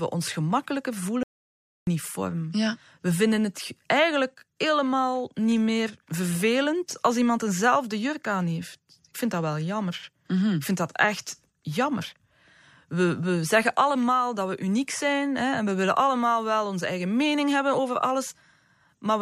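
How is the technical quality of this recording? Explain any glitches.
The recording has one glitch, an audio dropout to silence from 1.23 to 1.87 s, right after "ons gemakkelijker". The input signal was likely lost while recording continued, so about 0.64 s of speech vanishes into silence with no room tone.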